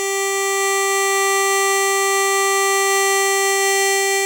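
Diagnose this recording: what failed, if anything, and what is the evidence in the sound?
Codec stage: generation loss runs through the music, which sounds swirly, hollow and smeared, with blurred attacks. One WMA-style encode near 128 kbit/s would not do this. The likely cause is about four encodes, each requantising on a shifted frame grid. A spectrogram shows nothing above 20.1 kHz.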